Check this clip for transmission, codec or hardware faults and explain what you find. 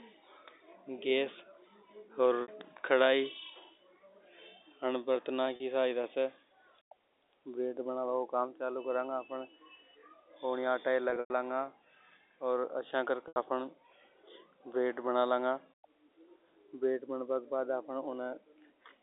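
Four dropouts from packet loss with pitch repetition occur in the speech, at 2.42–2.48 s (60 ms), 5.56–5.60 s (40 ms), 11.10–11.30 s (140 ms scattered, longest run 100 ms) and 13.28–13.36 s (80 ms). The sizes fit 20 ms packets. The receiver repeats the last pitch period, fading it over about 50 ms. At 5.56 s this gives a brief buzzy hold. Longer gaps fade to silence before the speech cross-fades back.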